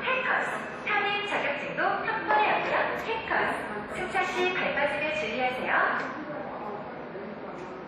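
Throughout the clip the sound rings and smears, with a washy hiss that swells and fades along with the signal, and nothing reaches above 13.7 kHz. This is likely WMA compression: long transform blocks spread quantisation noise in time, which fits a bitrate near 48 kbps.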